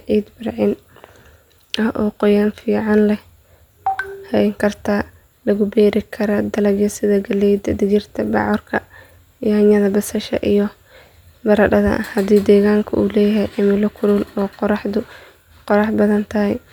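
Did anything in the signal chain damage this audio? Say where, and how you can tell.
No, nothing audible in this speech recording points to damage at any stage of the chain.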